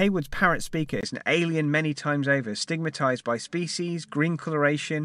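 At 1.01 s, after a 20 ms silence, the speech loses everything above 10.5 kHz and turns duller, likely from an input switched to a poorer device.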